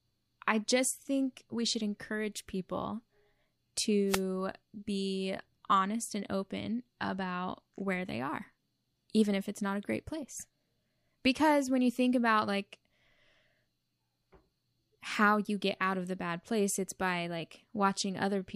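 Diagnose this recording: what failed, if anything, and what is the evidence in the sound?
A wireless microphone noise hit occurs in the analogue radio link between the transmitter and the receiver, ahead of any conversion. From 4.08 to 4.22 s, about 0.15 s, a short burst of static swish rises over the speech before clearing. The FM carrier faded as reflected paths cancelled the direct signal at the receiving antenna, so the receiver's noise rose and broke through the demodulated audio until the signal recovered.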